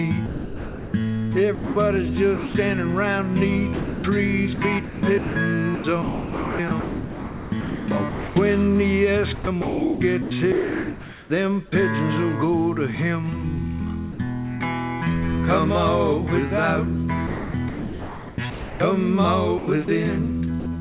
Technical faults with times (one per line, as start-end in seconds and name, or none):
0.26-2.54 sound chopped by the voice detector
3.74-8.36 sound chopped by the voice detector
9.35-11.30 sound chopped by the voice detector
14.12-14.18 sound dropped by the voice detector
17.27-20.66 sound chopped by the voice detector